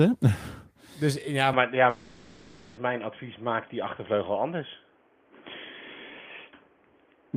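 At 1.53 s the sound abruptly narrows and turns boxy, with no gap and no change in loudness. This is an input switched to a poorer device, likely a headset's call profile. On a spectrogram, everything above 3.4 kHz vanishes at that point, and a new noise floor appears about 35 dB below the signal.

From 1.89 s to 2.79 s a long network dropout occurs. Its likely cause is audio packets failing to arrive. The receiver fills the whole 880 ms by stretching the last sound into a droning, fading buzz, with no silent stretch. The waveform shows a smooth, repetitive envelope, and the spectrogram shows smeared, static bands instead of changing detail.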